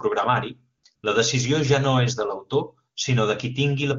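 Speech clip with AMR comfort noise at 0.77 to 0.83 s and 0.95 to 1.03 s, just before "la decisió ja no": speech frames stop and steady synthetic noise replaces the real background.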